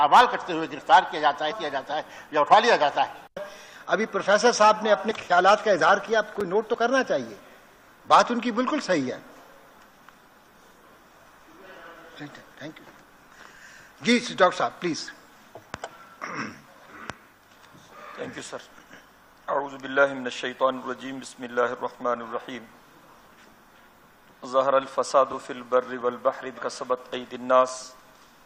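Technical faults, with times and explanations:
1.50–1.52 s, 5.10–5.12 s and 26.57–26.59 s: damaged data in a compressed stream. The decoder misreads corrupted frames and resyncs, giving chirps, squawks, clicks or short holes seen as brief broadband smears on a spectrogram.
6.41 s: block of digital silence. About 5 ms of samples drop to silence with no fade, heard as a tick; the waveform shows a flat notch with abrupt edges.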